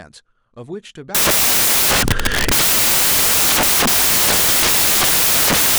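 Speech, until at 1.15 s it gives way to loud, harsh broadband noise that lasts to the end. These are samples built from the wrong bytes: each value is assembled misaligned or byte-swapped, so the rapidly fluctuating low bits dominate.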